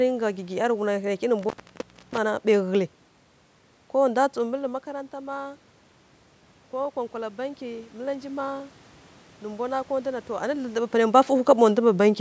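At 1.39 s the sound cuts out abruptly, and it returns at 2.18 s. This is an intermittent contact. A loose plug or cable lost its connection for a moment, so the signal path simply opened. The gap lasts about 635 ms. Each edge of the dropout carries a short crackle as the contact breaks and remakes. While the line is open, a faint hiss remains. The later level changes near 4 s and 10.5 s come from the talker moving.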